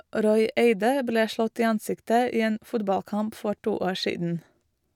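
There are no technical faults to describe, at any point in the speech.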